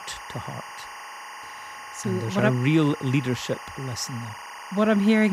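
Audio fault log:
throughout, timecode bleed: a steady chirping warble sits behind the speech, roughly 15 dB below it, flipping between pitches around 1 and 2 kHz. Linear timecode from a neighbouring track or cable is leaking in. Its square-wave bits switch between the two tones, and the pattern repeats at a rate that fits 24 frames per second. That rhythmic two-pitch chatter sets it apart from mains hum or a single-pitch whistle, which hold one steady tone.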